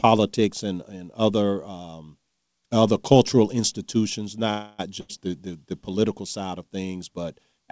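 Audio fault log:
4.50–4.81 s, call audio freeze: just after "um other cultural institutions" the sound stalls for about 0.29 s as a fading held buzz or hiss, then resumes where it stopped with nothing missing. This points to packets likely held up in transit, draining the jitter buffer.
5.01–5.11 s, burst of packet loss: roughly 80 ms of audio is lost just before "the the the political", bridged by the last sound stretched and faded to a brief buzz or hiss. Delivery then picks up further along, so that stretch is gone.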